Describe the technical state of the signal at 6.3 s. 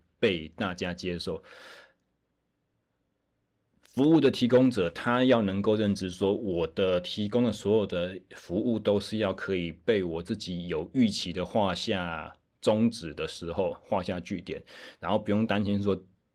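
Around 6.21 to 6.27 s the speech turns briefly rougher and grainier, with added noise, but it never drops out. This is a lost packet rebuilt from error correction: the decoder filled about 40 ms, which fits two 20 ms frames, using the low-bitrate copies carried in the following packets. Those copies lack fine detail and the highest frequencies, so the gap is covered by a coarser stand-in rather than silence.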